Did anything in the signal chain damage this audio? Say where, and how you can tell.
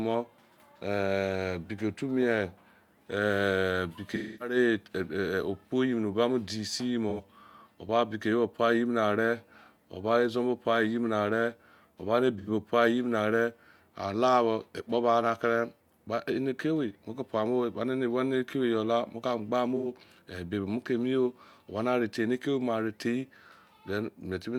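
Yes. The speech smears into brief noisy, phasey patches at 4.15–4.56 s, after "ba modise" at 7.09–7.23 s, at 12.38–12.49 s, and before "ebi mo" at 19.76–19.90 s. This is AAC frame loss with concealment at the codec stage: the decoder rebuilt the missing frames from the last good spectrum. The 0.26 s gap fits about six lost frames, and the shorter ones fit about two.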